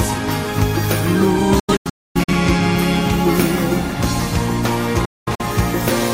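A digital broadcast dropout occurs twice: the receiver stopped getting good frames and muted until valid data returned. From 1.59 to 2.33 s, the sound drops out in several holes totalling 0.47 s spread over 0.68 s, the longest 0.26 s, each cut with an 8 ms fade. From 5.05 to 5.43 s, 0.26 s disappears across 0.34 s, mostly in one 0.21 s gap. The missing material is gone, not delayed.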